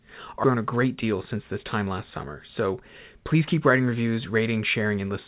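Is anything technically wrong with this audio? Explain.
Yes. At 0.44 to 0.46 s the speech lurches forward: roughly 0.7 s of it is simply gone, and the two sides are spliced together with no gap or fill. This is a skip ahead. A stretch of audio was lost in transit or discarded by an overflowing jitter buffer while later audio was already queued, so playback jumped straight to the waiting material. The receiver's delay fell by about the same amount.

From 0.56 to 2.27 s the talking sounds hurried at an unchanged pitch, running at about 106% speed, and again from 2.67 to 3.42 s at about 105%. This is jitter buffer speed-up. With more audio buffered than its target, the receiver repeatedly cut out short pitch-period-sized pieces to shrink the delay, removing around a tenth of a second in the first stretch and around 50 ms in the second.

Throughout, nothing is heard above 4 kHz, which fits a narrowband call codec such as G.711 mu-law on the call path.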